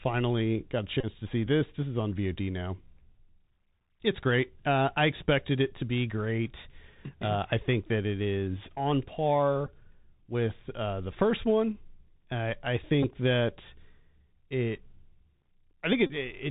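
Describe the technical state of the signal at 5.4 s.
At 5.4 s the speech is running through a Bluetooth CVSD headset codec, as it does for the whole clip. CVSD sends one bit per sample saying only whether the waveform steps up or down, with an adapting step size, a scheme consistent with a 64 kbps link. Nothing above 4 kHz survives. Where the signal climbs faster than the step can follow it distorts, s sounds come out scratchy, and a granular hiss sits beneath the speech. The damage is plainly audible.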